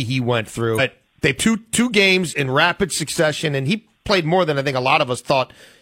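Compressed frames get skipped at 0.75 s and 1.35 s, where the speech jumps ahead roughly 0.7 s, then 0.3 s.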